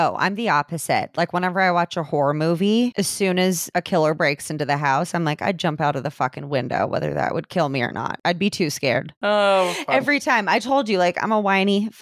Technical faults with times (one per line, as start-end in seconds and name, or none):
none